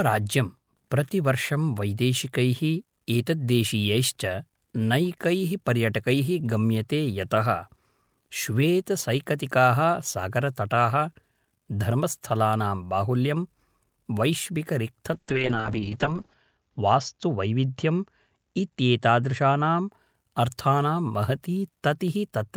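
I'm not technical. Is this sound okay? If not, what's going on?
No. There's a call bitrate drop from 15.14 to 19.97 s. Partway through the call, the connection judged it had less room, so the speech was squeezed into far fewer bits. With less detail to work with, the voice turns rough and watery, and the crisp top end disappears, leaving it muffled. It's worst for about a second before clearing up again.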